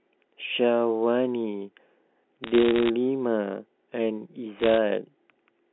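From 2.44 to 2.90 s and 4.59 to 4.78 s, bit errors on a digital phone line flip samples into sharp ticks: lone waveform spikes, vertical spectrogram streaks.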